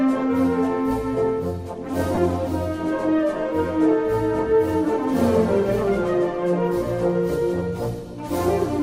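Lost LE Audio frames occur from 2.15 to 2.18 s, a gap of about 22.5 ms, which fits three consecutive 7.5 ms LC3 frames going missing over the Bluetooth LE link. With nothing to decode, the LC3 decoder fills the hole by repeating the last good spectrum with its signs scrambled at random, so any tonal content briefly turns into a short, noisy smear before normal audio resumes. The coding of the surrounding lossy compression is light.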